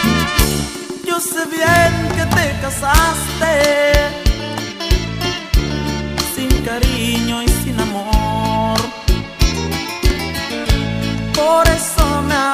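The audio has integer overflow cracks at 0.40, 1.76, 2.32, 2.95–3.00, 3.65–3.95, 6.51, 8.78 and 11.66–12.02 s, where peaks exceeding the integer limit, by about 1 dB at most, wrap to the opposite sign instead of being limited.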